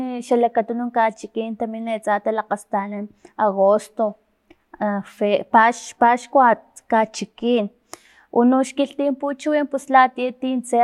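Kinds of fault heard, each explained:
No technical fault can be heard anywhere in the speech. A close listen finds nothing that calls for an entry here.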